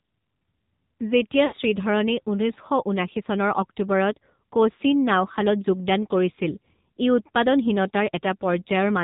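Throughout, the speech passes through the AMR narrowband mobile codec at 7.4 kbps: nothing above 4 kHz survives, and the coarse pulse model leaves a plainly buzzy, synthetic tone. From 1.46 to 1.55 s, lost AMR speech frames, about 60 ms, likely from radio errors, make the decoder stretch the last pitch with falling gain, so the sound smears and fades.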